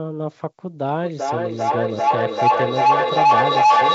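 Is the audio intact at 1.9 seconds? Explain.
No. At 1.9 seconds a feedback howl dominates: a steady tone around 1 kHz, pulsing roughly every 0.4 s and up to about 10 dB louder than the speech. It runs from 0.88 s to the end of the clip. Two devices in the same room on one call form a loop from microphone to loudspeaker and back that gains level on each pass, so the repeats build and narrow to a single favoured frequency.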